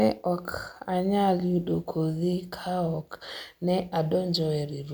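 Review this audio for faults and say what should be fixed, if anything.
Nothing needs to be fixed, since no faults turn up in this audio.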